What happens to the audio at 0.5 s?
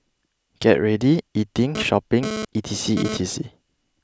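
Nothing goes wrong at 0.5 s; the audio plays through that point intact, with no dropout, click or other disturbance.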